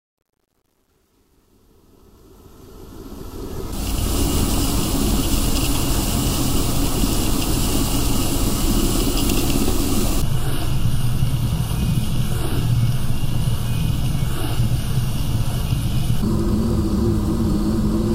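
From 0.0 to 4.27 s the fade-in sounds gritty, worst before 2.85 s. This is truncation distortion on a fade, fitting an undithered 10-bit gain stage.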